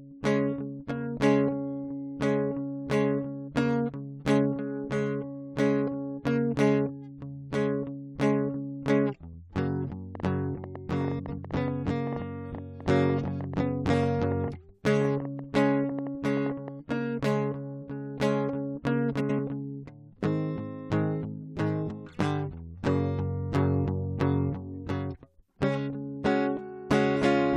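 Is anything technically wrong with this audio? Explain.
Yes. Two faults can be heard in this music.

A train of clicks runs from 10.15 to 17.26 s. About fifty clicks arrive at roughly 6.6 per second, unevenly spaced, and peak around 5 dB above the music. They tick through quiet moments too. Electrical interference or a faulty connection is the likely cause.

Frames out of order occur at 11.19 to 11.39 s and 19.20 to 19.40 s. Each time, two neighbouring blocks of about 93 ms, which fits four frames each, play in swapped order. The music flutters and garbles briefly. No time is lost.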